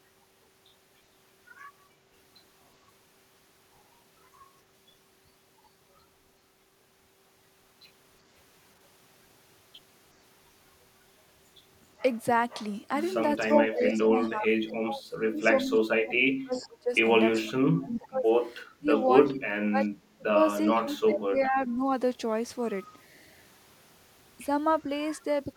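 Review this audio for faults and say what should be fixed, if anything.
Between 13.43 and 21.83 s the speech dips, thins and drops out in pieces, adding up to about five seconds, with the deepest drop about 30 dB. This is speech suppressed in double talk: with both sides talking at once, the echo canceller likely could not tell the near talker from the loudspeaker echo and attenuated everything it heard. Tuning the canceller's double-talk detection, or using a full-duplex headset, would prevent it.

Faint delayed copies of the speech appear at 13.49–13.54, 16.53–16.68, 17.32–17.98, 18.66–18.70 and 19.84–19.88 s. Each trails its source by 374 ms, at about 35, 20, 20, 30 and 35 dB below the speech. This is echo leak: the far end's loudspeaker was picked up by its own microphone, and the residue its echo canceller likely failed to remove was sent back. Better echo cancellation at that end, or headphones instead of a loudspeaker, would prevent it.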